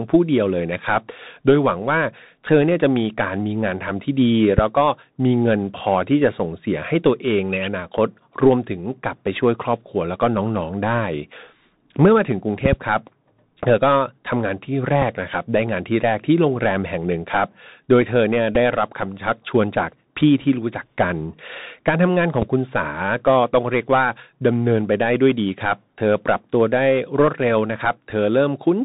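The speech runs through a Bluetooth CVSD headset codec from start to finish. CVSD encodes each sample as a single up-or-down bit and adapts its step size as it goes. Nothing above 4 kHz survives, so the sound is narrow and boxy. Loud high sounds outrun the step and break up. S sounds turn scratchy. A grainy hiss sits under everything. The damage is plainly audible.

At 4.58 to 4.61 s a loud pop lands on top of the speech, about 15 dB above it. The speech carries on underneath. A sudden voltage step is the likely cause, from a plug, a switch or static. The circuits after it shape the pulse into a sharp crack.

At 12.66 to 12.75 s there is a second loud pop event. This time two pops come in quick succession, again about 15 dB over the speech.

At 15.02 s a Bluetooth headset packet repeated fault occurs. About 7.5 ms of audio went missing between headset and phone. That fits two lost 3.75 ms packets. 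The chip decoded the previous packet's bits again to fill the gap. The result is a brief buzz near 267 Hz until good packets return.

The same packet repeat happens at 18.55 s, with another 7.5 ms lost. It is heard as a similar brief buzz.

At 22.42 to 22.44 s a final loud pop hits, about 15 dB above the speech, as a single sharp crack.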